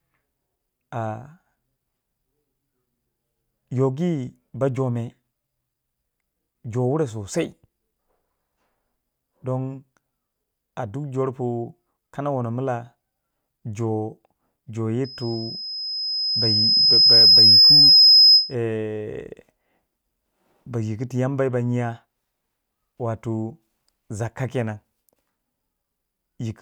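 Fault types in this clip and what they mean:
Loudspeaker feedback squeal: a microphone is picking up the loudspeaker it drives, so one frequency keeps circling the loop and growing. From 15.04 s to 18.55 s a single 5.1 kHz tone swells over about two seconds until it sits about 15 dB above the speech, then stops. Unlike a steady interference whistle or hum, it is not present from the start at a fixed level. It appears partway through and builds from nothing.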